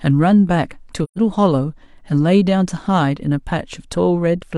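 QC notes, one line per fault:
1.03–1.19 s, AAC frame loss with muting: the speech drops into a soft-edged silent hole lasting about 128 ms, which fits three lost frames zeroed by the decoder. Overlapping windows fade it out and back in. On a spectrogram there is a blank vertical band, and on the waveform a tapered gap.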